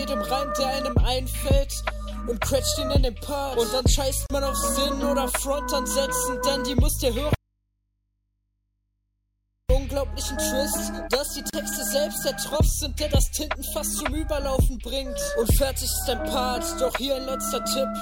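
At 4.26 to 4.30 s there's a gap at a join of encoded pieces: about 35 ms of silence with smeared edges, left by encoder delay and end padding that weren't trimmed before the pieces were joined. From 7.35 to 9.70 s there's an audio dropout to a faint residue, likely the signal being lost while the path downstream stayed live. The sound cuts out abruptly for 2.35 s, leaving only mains hum about 50 dB down, then snaps back. Another of those join gaps turns up at 11.50 to 11.53 s, again about 36 ms.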